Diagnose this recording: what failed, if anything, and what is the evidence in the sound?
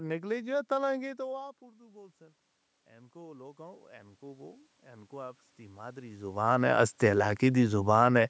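The call processing stage is at fault, specifically automatic gain rising. Around 1 s the talker drops back from the mic. The gain then climbs about 4 dB from 1.01 to 2.49 s and about 8 dB more from 3.12 to 6.35 s, so voice and room noise swell up together.

Automatic gain falling follows. The talker comes back in near 6 s, and with all that boost applied it arrives loud. From 6.44 to 8.07 s the gain control eases down about 3 dB, and the background sinks right along with the voice, which gives away the gain stage.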